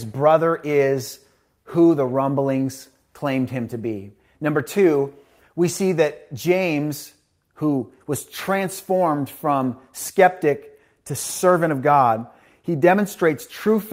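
No technical faults can be heard anywhere in this recording.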